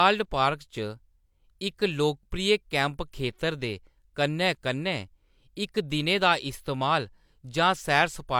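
No audible technical faults anywhere in the speech recording.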